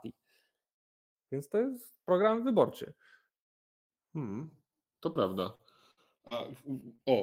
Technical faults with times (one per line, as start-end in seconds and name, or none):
0.00-7.22 channels drifting apart
5.13-5.17 short concealed packet loss
5.55-6.33 repeated packet loss (robotic sound)
6.81-7.00 short concealed packet loss